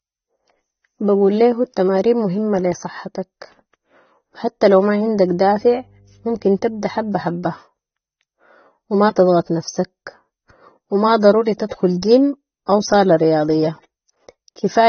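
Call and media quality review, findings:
Likely AAC compression, AAC-LC at a low rate; damage plainly audible, consistent with roughly 27 kbps. Encoder discards everything above 6.3 kHz and starves upper bands of bits, so speech sounds dull and smeared throughout, sibilants thin and fizzy, sustained vowels warbling as sparse spectral lines shift frame to frame.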